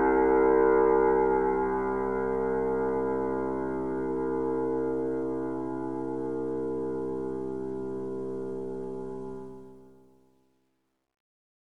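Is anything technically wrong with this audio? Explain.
Yes. From 9.34 s to the end at 11.66 s, the fade-out turns grainy, and from about 10.26 s it grows harshest instead of sinking smoothly into silence. This is truncation distortion on a fade: the level stage keeps only 11 bits without dither, so the dwindling waveform collapses into coarse square steps.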